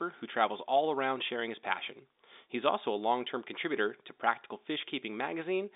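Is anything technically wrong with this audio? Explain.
No, nothing here is technically wrong.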